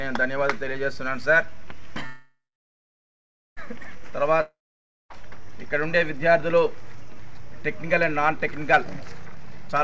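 The audio comes through a band-limited call path with nothing above 8 kHz, which fits a wideband codec such as G.722 at 64 kbps. At 2.06 s the sound stops moving and the last moment is smeared into a fading buzz that sinks into silence for about 1.1 s. At 3.59 s the audio picks up exactly where it left off, with nothing skipped. This is a call audio freeze. The likely cause is packets stalling in transit so the jitter buffer ran dry, and the receiver filled roughly 1.5 s with concealment. Everything afterwards now plays about 1.5 s later than it should. From 4.41 s to 5.12 s the same fading hiss appears again and drops to silence for about 0.55 s. This time, when the audio returns, it has jumped ahead. This is a long network dropout: roughly 0.7 s of audio most likely never reached the receiver, so that stretch is simply gone rather than postponed. From 9.32 s to the end of the clip the audio sounds hurried and runs at about 158% speed while holding its pitch. 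This is a jitter buffer speed-up. The buffer had built up more audio than its target, so the receiver trimmed many short pitch-period slices in quick succession, cutting around a third of a second to pull the delay back down.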